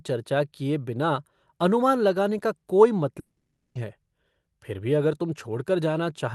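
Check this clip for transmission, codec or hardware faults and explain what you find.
One fault, on a call-codec path whose top end stops around 12 kHz. From 3.19 to 3.78 s the sound smears into a fading buzz, then goes quiet before resuming. That's likely a long network dropout: about half a second of audio was lost, and concealment filled the gap.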